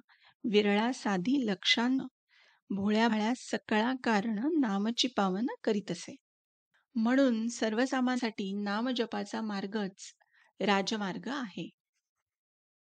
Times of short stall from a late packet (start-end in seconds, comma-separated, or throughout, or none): none